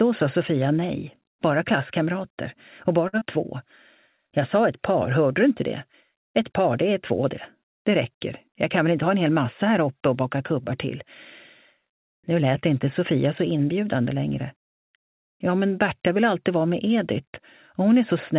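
Audio carried over a call path whose band stops at 4 kHz has three timing faults. From 3.08 to 3.16 s there is a short stall from a late packet. The next packet arrived late and the jitter buffer ran dry, so the receiver held the last sound for 48 ms before resuming where it left off. The sound seems to hang briefly with a slight buzz or dip and nothing is skipped, but the playout delay grows by 48 ms. On a spectrogram, the harmonics run flat and repeated across that stretch, and the waveform shows near-identical cycles. Just after, from 3.19 to 3.24 s, comes a short concealed packet loss. Thirty milliseconds of audio never arrived in time. The decoder bridged 22 ms of the gap by extending the preceding sound and then crossfaded back into real audio. This is heard as a quick smear or wobble. A spectrogram shows a blurred patch with softened onsets where detail should be, and the waveform shows a small amplitude dip or a stretch of synthetic-looking repeats. 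From 8.48 to 9.08 s there is a jitter buffer speed-up. Too much audio had built up in the buffer, so the receiver cut out short pitch-period slices repeatedly, removing about 40 ms in total. Playback runs at 106% speed with unchanged pitch and sounds slightly hurried. In the waveform, the periodic cycles sit closer together with tiny splice points. On a spectrogram, events are compressed in time while the harmonic spacing stays the same. The hard 4 kHz ceiling, seen as empty spectrogram area above that line, fits G.711 mu-law at 64 kbps.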